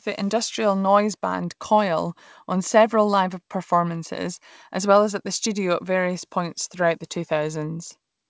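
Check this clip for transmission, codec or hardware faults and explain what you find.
No transmission, codec or hardware faults can be heard in the speech; it has passed through a WebRTC call path whose band limit leaves nothing above 8 kHz, which fits a wideband codec such as G.722.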